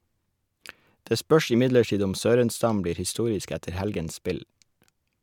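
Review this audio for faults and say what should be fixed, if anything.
Nothing needs fixing; no faults can be heard here.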